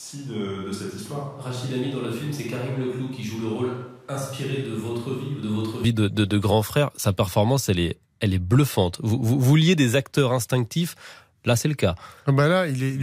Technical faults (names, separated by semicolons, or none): switch to a distant microphone